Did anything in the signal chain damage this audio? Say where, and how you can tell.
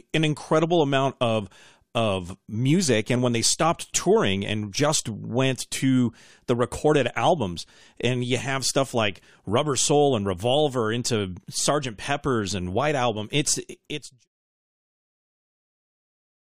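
No, the speech simply fades out by 14.3 s.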